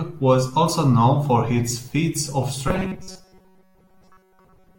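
A speech clip that goes robotic from 2.68 s right after "for his feats of" through to the end, a rigid metallic buzz around 188 Hz over most of that stretch, likely from audio arriving too slowly, with a roughly 5.3 ms buffer repeated over and over.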